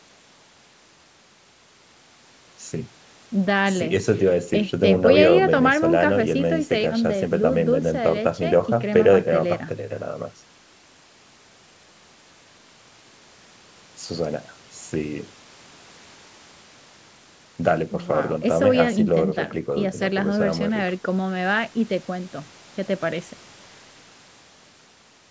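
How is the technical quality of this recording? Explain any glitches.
No technical glitches can be heard in the speech, which carries the normal signature of call microphone processing: the high-pass filter trims the lowest bass and nothing extends above 8 kHz.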